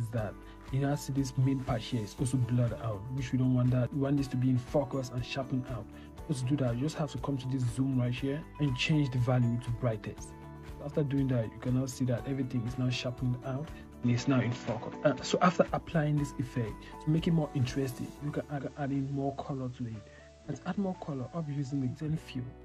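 At 14.03 s the sound abruptly turns duller and boxier, with no gap at the transition, and stays that way until 15.67 s. The likely cause is an input switched to a poorer device, with recording moving to a lesser microphone or headset profile with a narrower passband. On a spectrogram, the upper band vanishes at a sharp, flat ceiling, and a faint new noise floor appears well below the signal. The waveform shows a modest level step at each edge.

From 18.39 s to 22.17 s, digital radio blending to analogue occurs: the receiver loses the digital stream and cross-fades over about 319 ms to the station's FM broadcast. Steady hiss rises beneath the sound, and the level falls by about 3 dB. A spectrogram shows a diffuse hiss carpet filling the quiet gaps. The waveform envelope steps down through the blend and settles lower for the rest of the span.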